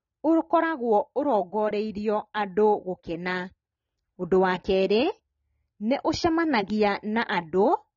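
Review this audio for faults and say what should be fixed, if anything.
Throughout the speech, nothing sounds above about 6.9 kHz, and damage is plainly audible. This is likely AAC compression, consistent with roughly 24 kbps AAC-LC. Encode at a higher bitrate to prevent it.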